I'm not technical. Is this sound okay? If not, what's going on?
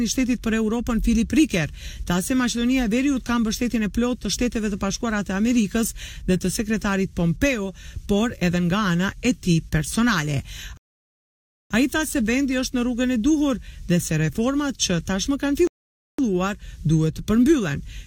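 No. The sound goes silent at 10.77 s for about 0.9 s and at 15.67 s for about 0.5 s, then picks up exactly where it stopped. These are rebuffering stalls: the player ran out of downloaded audio and waited for more.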